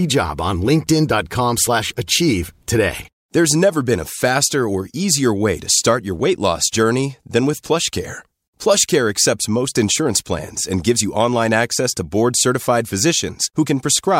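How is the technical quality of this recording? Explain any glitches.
No glitches or technical faults are audible anywhere in the recording.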